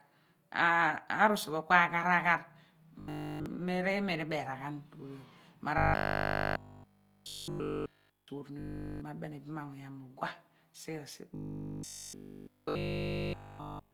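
Speech, and the whole thing has a grainy, rough texture with noisy-sounding tones, likely Opus compression in its music mode. The full bandwidth is still there, but the damage is plainly audible and fits something around 24 kbps. Then there's the robotic sound from repeated short buffers at 3.00 to 3.46 s, 5.78 to 8.28 s, 8.59 to 9.01 s and 11.35 to 13.93 s. The sound turns into a rigid metallic buzz at 50 Hz, likely because the playback was looping the same 20 ms chunk over and over while essentially all the real audio in those stretches got skipped.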